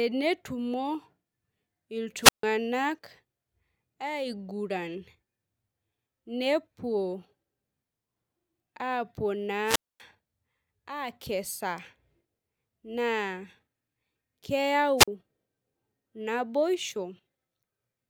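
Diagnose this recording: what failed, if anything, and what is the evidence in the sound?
Wireless microphone squelch dropout at 2.21, 9.65 and 15.0 s: the RF link fades, hiss rises, then the receiver's squelch mutes speech for 147, 245 and 43 ms.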